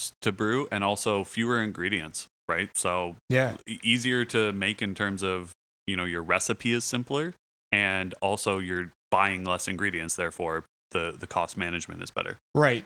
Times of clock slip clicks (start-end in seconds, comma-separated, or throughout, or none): none